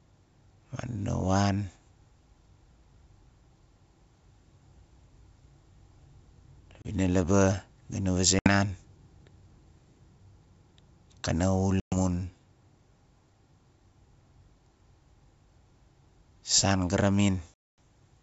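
Packet loss on an ADPCM call breaks this wideband speech recording at 6.82–6.86 s, 8.39–8.49 s, 11.80–11.95 s and 17.54–17.78 s, with hard-edged silent holes of 30, 70, 120 and 240 ms, the longest amounting to a run of roughly twenty packets. Each gap leaves the decoder's adaptive predictor and step size out of step with the sender's, so speech comes back with brief, slight distortion before settling.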